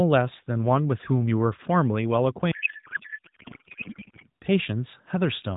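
From 2.52 s to 4.29 s a codec payload misread occurs: the receiver unpacks the AMR frames in the wrong bit layout, which points to octet-aligned payloads read as bandwidth-efficient. The speech there turns into garbled noise and warble that barely tracks it.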